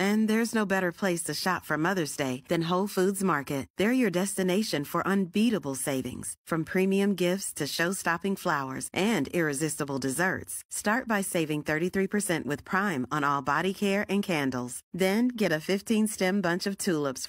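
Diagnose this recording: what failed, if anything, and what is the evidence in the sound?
Nothing failed, and the sound gives no evidence of a fault at any stage of the chain.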